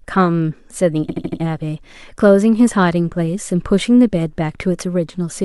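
It's a speech clip with a clear case of repeated frames: from about 1.09 s to 1.40 s the same 78.4 ms stretch of audio plays back-to-back, four extra times, so you hear a quick mechanical stutter. That block length fits a run of about three compressed frames being written or sent more than once, with the decoder faithfully playing each copy. The repeats add about 313 ms, so everything after the stutter arrives that much later.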